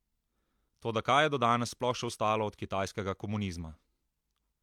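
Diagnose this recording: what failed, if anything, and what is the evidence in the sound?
Nothing in the chain failed: the speech signal stays continuous and intact throughout, with no audible break, distortion or level disturbance anywhere in the recording.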